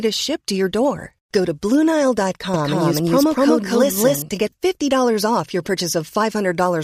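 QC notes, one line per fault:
2.54–4.22 s: doubled audio track. A second, full-band copy of the speech runs about 200 ms behind the original at roughly the same level, so each syllable is followed by a distinct, equally strong repeat rather than a decaying echo. It has no reverberant tail or room colouring, and it switches on and off abruptly at the range edges. This is likely a second capture through a slower path mixed in.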